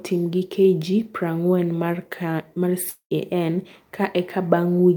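At 2.89 s the speech breaks off until 3.13 s. This is a long network dropout, likely from packets that never arrived in time. The receiver covers the gap by stretching the last sound into a fading buzz or hiss for about 0.21 s. Near the end, about 0.1 s of near silence remains. Speech then resumes at 3.13 s. Roughly 0.22 s of the original audio is simply gone.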